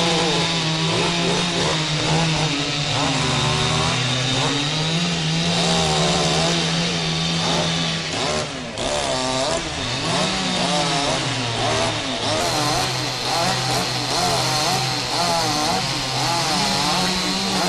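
At 12.40 s the sound suddenly runs fast, a section at the wrong speed that lasts to the end at 17.68 s. Playback is about 1.13 times normal. Pitch rises together with tempo, roughly two semitones. The likely cause is a player or edit running on the wrong clock.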